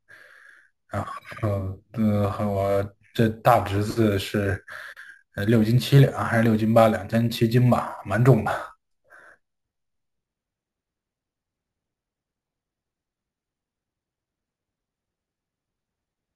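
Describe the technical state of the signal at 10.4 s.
Imaging from sample-and-hold upsampling runs throughout: 16 kHz speech was sample-repeated to 44.1 kHz, so a metallic fizz mirrors into 8–16 kHz at about -24 dB.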